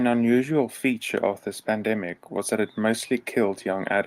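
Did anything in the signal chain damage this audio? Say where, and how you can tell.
No, nothing in the signal chain has left audible damage on this speech recording. Every stage from capture to playback passes the audio through without any sign of a fault.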